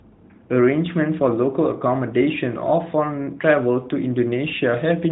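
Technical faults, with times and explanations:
No technical faults are present in the clip. The audio carries the narrow band of the AMR narrowband mobile codec, with nothing above 4 kHz and only light coding texture, which fits its highest 12.2 kbps mode.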